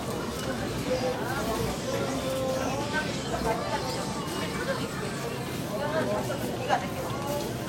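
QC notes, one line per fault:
0.51–7.57 s, clock drift buffer slips: a click recurs every 1.18 s, likely two device clocks about 150 ppm apart, each slip dropping or repeating a few samples.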